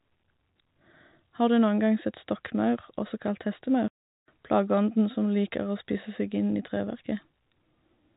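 From 3.88 to 4.28 s the speech cuts out for 400 ms: packet loss filled with silence, consistent with about twenty 20 ms packets going missing. The waveform shows a flat gap with abrupt edges. The spectrogram shows a blank vertical band below the 4 kHz telephone ceiling.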